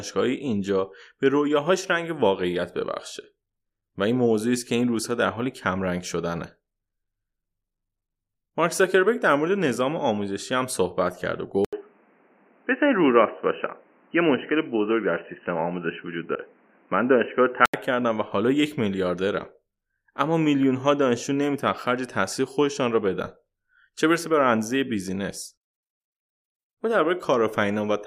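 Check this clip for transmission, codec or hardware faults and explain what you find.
Two faults turn up, one inside the other.

From 11.65 s to 17.74 s the speech abruptly turns dull and boxy, with nothing above 3 kHz, after a gap of about 80 ms. A new background noise sits roughly 35 dB below the speech, while the overall level stays about the same. The likely cause is the input switching to a poorer device, such as a second microphone or a headset in call mode. Its narrow passband and its own noise floor replace the original path until full bandwidth returns at 17.74 s.

From 16.32 s to 16.37 s, within that narrowband stretch, a brief glitch cuts through the speech. This is damaged data in a compressed stream. A short run of corrupted bytes gives the decoder frames it cannot read correctly, so it outputs garbage or drops out for a moment while it regains sync on the next valid frame header.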